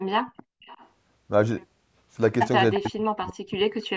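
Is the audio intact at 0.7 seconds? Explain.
No. From 0.62 to 0.9 s a faint echo leak repeats the speech 351 ms late, likely residue an echo canceller missed, heard as a distinct delayed copy rather than smooth reverberant decay.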